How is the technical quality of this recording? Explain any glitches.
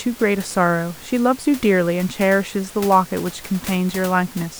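No glitches can be heard anywhere in the recording. A little background noise from the room sits about 18 dB below the speech, which is part of the recording itself.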